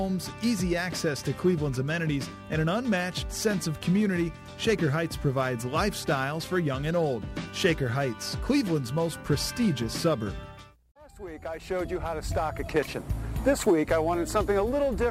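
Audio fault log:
No audible faults found anywhere in the recording.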